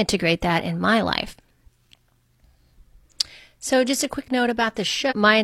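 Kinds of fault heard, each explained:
Damaged data in a compressed stream: at 5.07 to 5.13 s, near the end of the speech, a brief blip of about 66 ms breaks through. Part of the encoded stream there is corrupt, so the decoder cannot read those frames correctly. It produces garbled output or drops them, loses its place in the bitstream, and resynchronises only when it finds the next valid frame header.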